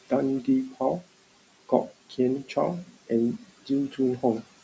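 Noise suppressor artifacts run through the whole clip. The suppressor pulls down the bands it judges to be steady room noise, by about 18 dB. The room noise, about 19 dB below the speech, sinks in the gaps and swells back under the talking.

Speech is cut by the noise suppressor three times. The suppressor mistakes quiet speech for noise and turns it down with the background. It happens at 0.70 to 0.81 s, at 3.39 to 3.70 s, and at 3.90 to 3.99 s. The drops reach about 13, 15 and 12 dB. Each hit lasts about a tenth of a second. Those sounds come out swallowed and faint.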